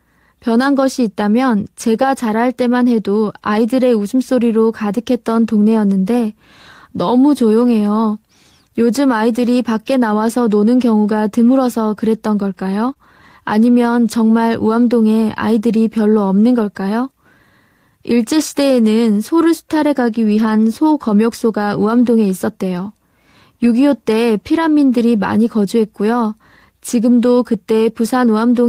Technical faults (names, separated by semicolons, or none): lost packet rebuilt from error correction; short concealed packet loss